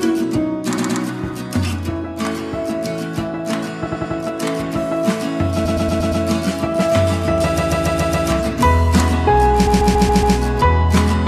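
Repeated frames stutter the sound at 0.77, 3.86, 5.64, 7.57 and 9.66 s. Blocks of 93 to 139 ms replay two to five times, seen as identical copied waveform segments.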